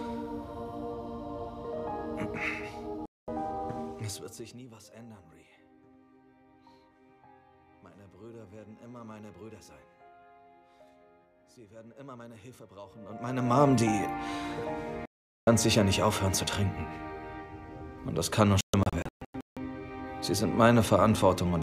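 At 3.06 s and 15.06 s, digital broadcast dropouts mute the audio for about 0.22 s and 0.42 s. Between 18.61 and 19.57 s, scattered holes (longest 0.16 s) break it up. Each drops to silence and loses the programme.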